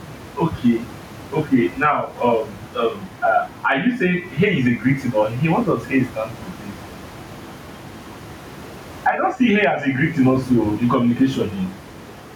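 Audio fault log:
throughout gain pumping: input gain is likely set far too high, so a fast limiter clamps down on each loud syllable and lets go in the pauses. The room noise sits about 29 dB under the speech, and the gain swings by around 10 dB, squashing the speech.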